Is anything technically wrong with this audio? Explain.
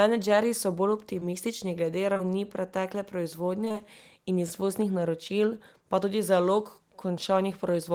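Yes, there's short concealed packet loss at 1.19, 2.13 to 2.21, 3.65, 3.68 to 3.87 and 3.72 to 3.76 s. Each time about 20 ms of the speech never arrived, so the decoder extended the last sound and blended back in, leaving brief smears or wobbles. Around 3.7 s it also pads in a little extra time.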